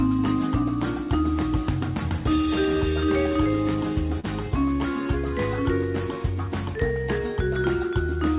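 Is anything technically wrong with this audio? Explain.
Yes. Short concealed packet loss, 4.20 to 4.26 s: about 40 ms never reached the decoder, so the receiver stretched the preceding sound across the gap, leaving a smear.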